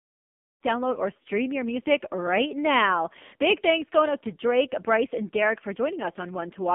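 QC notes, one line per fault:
throughout, AMR narrowband mobile codec: speech is confined to 200 Hz–3.5 kHz and rebuilt from a vocal-tract model fed by sparse pulses, so it sounds buzzy and synthetic, fitting a rate near 5.9 kbps. The spectrogram shows a flat ceiling at 3.5 kHz and smeared harmonics.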